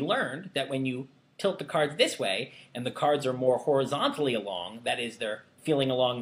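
No technical faults can be heard anywhere in this audio.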